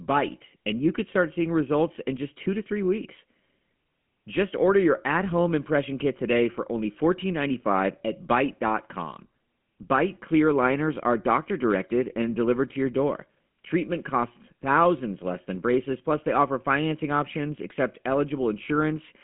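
From start to finish the speech passes through a GSM full-rate codec. The sound is confined to a telephone band of roughly 150 Hz to 3.4 kHz, with nothing above 3.7 kHz. The damage is plainly audible. The codec rebuilds the voice from a vocal-tract model driven by a sparse, regularly spaced pulse excitation, and the coarse excitation leaves a buzzy, gravelly roughness, consistent with a 13 kbps rate. A clean band-limited line would sound muffled but smooth.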